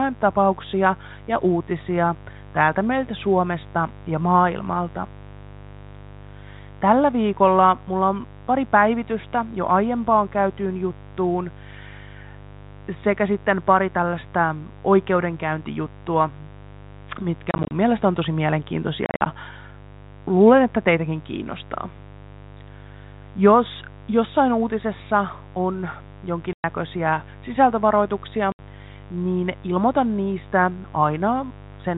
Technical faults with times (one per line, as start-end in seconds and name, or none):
0.00-31.97 mains buzz
17.51-17.71 packet loss filled with silence
19.06-19.26 packet loss filled with silence
26.53-26.64 packet loss filled with silence
28.52-28.59 packet loss filled with silence